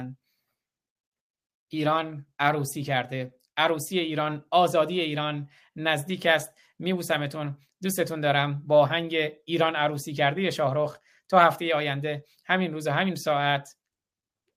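No technical faults can be heard anywhere in the speech. Nothing along the signal path draws attention to itself at any point.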